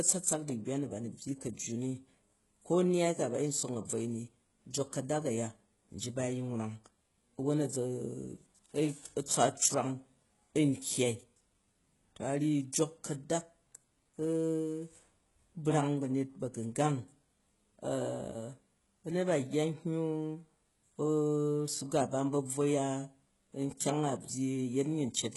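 Throughout, the speech has likely passed through HE-AAC compression at a rate fitting about 12 kbps. Heavy artefacts give gritty, lispy sibilants, and nothing lies above 11.5 kHz.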